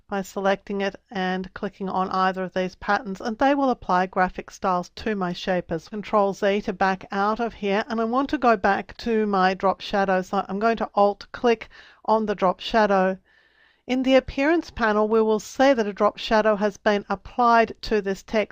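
At 5.91 to 5.96 s the audio jumps abruptly forward with a short blip, a stream segment skipped, likely from one segment failing to load. Unlike a dropout, there's no silent gap or resumption where it stopped: material is missing and playback continues further on.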